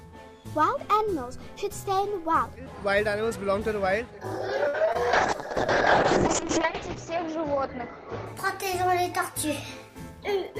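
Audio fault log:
4.67–4.76 s: short stall from a late packet. A packet arrived late and the jitter buffer emptied, so the receiver held the last sound for about 63 ms. Then it resumed from the same point. Nothing is lost, but that sound is drawn out, with a slight buzz or dip.
4.86 s and 4.93 s: short concealed packet loss. Twice, about 20 ms of audio never reached the decoder. The receiver extended the preceding sound to cover each gap, then blended back in. Each one is a brief smear or wobble.
5.13–10.29 s: call bitrate drop. The bandwidth estimate fell and the encoder went from 96 kbps down to 6 kbps. It stayed at the lowest rate for about 1.35 s. Coding turns coarse and the top end is cut from 20 kHz to 8 kHz, so the audio sounds rough and muffled.
9.75–10.51 s: jitter buffer speed-up. Too much audio had built up in the buffer. The receiver trimmed short pitch-period slices repeatedly, roughly 50 ms in all. 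Playback runs at about 106% speed with unchanged pitch, so the sound is slightly hurried.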